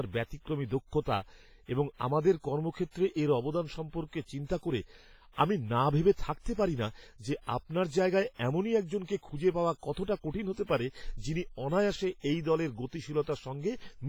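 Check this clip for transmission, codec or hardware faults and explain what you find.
One codec fault runs through the whole speech recording. WMA compression is the likely cause: long transform blocks smear quantisation noise over tens of milliseconds, giving heavy ringing, washy consonants and hiss that swells and falls with the signal. The damage fits a low bitrate around 24 kbps, with quiet spectral detail dropped out.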